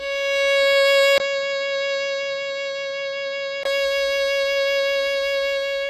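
HE-AAC compression runs throughout this music clip. The treble above the coded band is rebuilt rather than preserved, with nothing above 14.9 kHz, and the codec damage is plainly audible as gritty, metallic high end whose harmonics fail to align, which fits a very low bitrate around 20 kbps. An input switch to a poorer device likely occurs from 1.18 s to 3.65 s. A 20 ms silence marks the change, after which the band stops at 7.6 kHz, the level drops about 5 dB, and a new noise floor appears well beneath the music before the fuller sound returns.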